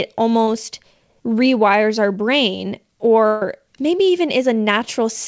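At 0.44 to 0.48 s there is a short concealed packet loss: about 30 ms of the call arrived too late, and the receiver patched it by extending the preceding sound before blending back. It is a brief smear rather than a gap, though about 30 ms of audio is skipped.

Just after "rewires our brain", from 3.27 to 3.42 s, a burst of packet loss follows. About 140 ms went missing, longer than the earlier one, and the concealment stretched the last sound out and faded it, with no silence. The audio then picks up further along, so that stretch is simply gone. Throughout, the G.722 call codec keeps the sound below 8 kHz.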